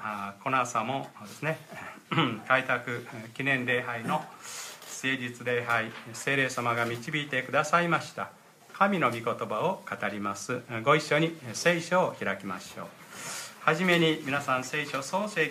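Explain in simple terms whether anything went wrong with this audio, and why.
Nothing went wrong with this audio, so there is no fault to name or explain. From the first moment to the last, nothing stands out that a listener would notice as a technical problem.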